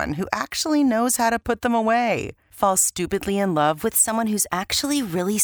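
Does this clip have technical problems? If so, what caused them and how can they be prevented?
Yes. From 3.85 s to the end, the speech suddenly runs about 6.3% faster and about a semitone (106 cents) higher. This is likely a drift correction step, where clock-matching software changed the playback rate in one jump to rebalance its buffer. Unlike wow or flutter, the pitch does not waver; it shifts once and holds. Using a shared clock for capture and playback, or resampling gradually in small increments, prevents this kind of abrupt correction.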